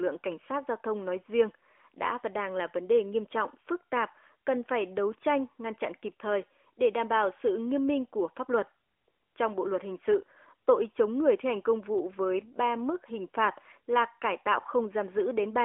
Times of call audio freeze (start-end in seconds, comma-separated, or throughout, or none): none